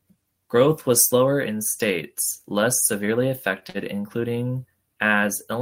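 Speech, with two short stalls from a late packet just after "in states less severely": one from 3.59 to 3.65 s and another from 3.70 to 3.77 s. Each time, the jitter buffer ran dry, and the receiver held the last sound for 21 ms and then 49 ms until the data arrived. Playback then resumed from the same point with nothing lost. The result is a briefly stretched sound with a faint buzzy dip, and the delay grows by those amounts.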